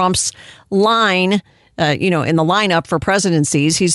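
From start to finish the speech carries a breathy, grainy edge on its upper frequencies, with the top of the spectrum replaced by a hiss-like texture rather than true detail. This is most likely Bluetooth LC3 compression. The damage fits a moderate rate near 48 kbps and 10 ms transform frames. Unlike a plain low-pass, the highs are present but noisy.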